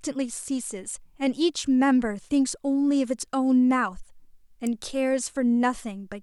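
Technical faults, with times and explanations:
4.67 s, electrical switching spike: a sharp snap lasting only a few milliseconds sits on top of the speech, peaking at roughly -15 dBFS. The cause is likely a nearby switch or static discharge arcing, with the audio line picking up that brief burst.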